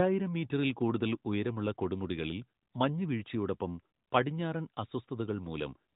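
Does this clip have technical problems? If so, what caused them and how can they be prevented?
No, no technical faults.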